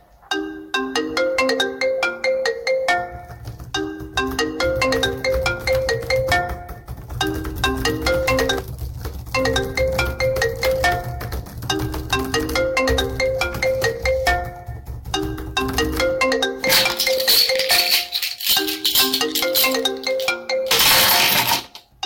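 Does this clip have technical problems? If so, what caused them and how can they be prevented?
Yes. Hard clipping runs through the whole recording: a stage was driven about 25 dB beyond what it could pass, so a few percent of samples had their peaks sliced flat. Those flat tops add high harmonics, giving every loud sound a harsh fuzz. Setting gain so peaks stay below full scale prevents it.

Compressed frames were skipped at 17.17 s: a couple of frames were missing or rejected by the decoder, so the audio jumps ahead a few milliseconds. Checking file integrity and transfer reliability prevents it.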